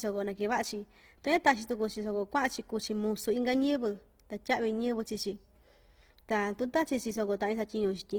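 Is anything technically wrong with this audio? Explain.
Yes. Throughout, the speech likely passed through Opus compression in its music mode at a rate that sounds like roughly 16 kbps. Short of bits, the encoder keeps each band's energy but fills fine detail with folded copies or noise, so the voice turns plainly rough and grainy while still extending to about 20 kHz.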